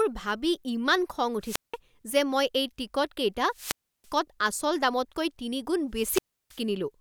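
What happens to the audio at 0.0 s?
Nothing goes wrong at 0.0 s: the speech starts cleanly there with no dropout, click or other audible fault.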